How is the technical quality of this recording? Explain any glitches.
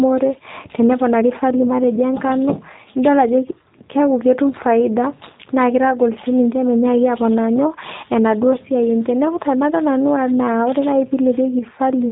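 The recording has one fault, audible for the whole clip: the speech has passed through a G.729 codec, and the damage is plainly audible. From start to finish, nothing is heard above 4 kHz. The voice sounds slightly rough and synthetic because it is rebuilt from a vocal tract filter, a pitch predictor and a few pulses per 10 ms frame, a rate that fits 8 kbit/s. A simple telephone band-limit would sound dull but smooth, without that buzzy, modelled texture.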